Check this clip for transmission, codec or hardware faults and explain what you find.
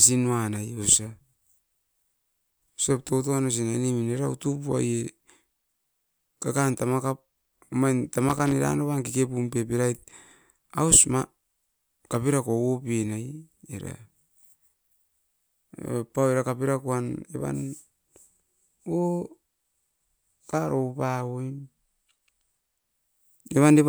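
There is one hardware fault. From 8.29 to 8.52 s, loose connector crackle cuts into the speech. A worn or dirty contact keeps making and breaking the circuit, chopping the signal. Any DC on the line turns each break into a pop. The result is a quarter-second burst of irregular scratching crackle.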